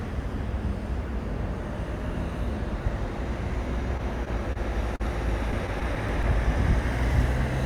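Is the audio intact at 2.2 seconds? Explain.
Yes, at 2.2 seconds the audio is intact, with no dropout, click, distortion or other fault to be heard at that moment.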